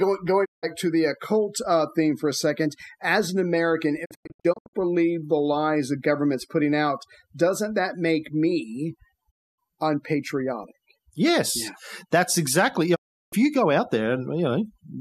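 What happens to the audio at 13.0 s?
From 12.94 to 13.34 s, a digital broadcast dropout cuts the speech. The receiver lost valid frames and muted, which fits about 15 lost frames. Roughly 360 ms of sound disappears after a quick 20 ms fade-out. The waveform goes flat, and the spectrogram shows a clean blank vertical band. Around this gap, overdone noise removal leaves a lowered background of twinkling specks. On the spectrogram these appear as scattered isolated dots.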